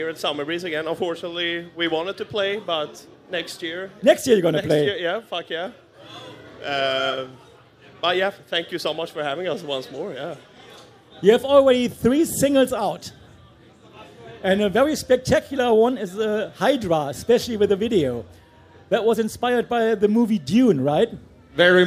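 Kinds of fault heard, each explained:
Nothing here to flag: I listened all the way and didn't catch a single technical fault in the sound.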